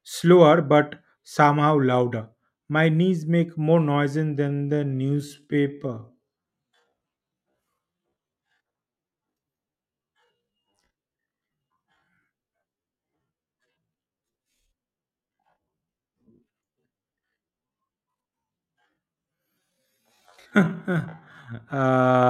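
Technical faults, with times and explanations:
4.46–22.3 s, time-stretched section: At 4.46 s the pace abruptly drops to 0.58 times normal and stays there to the end, while the pitch holds steady. Software likely stretched this part by repeating short pieces of audio. So the speech drags.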